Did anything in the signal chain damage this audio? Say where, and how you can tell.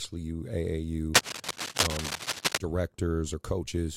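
Yes, the analogue wiring stage. From about 1.14 to 2.58 s, dense, uneven scratching and rustling sits over the speech at roughly the same level as the speech itself. That's cable scratch noise, likely from a worn cable or connector being moved, its contact resistance jumping about.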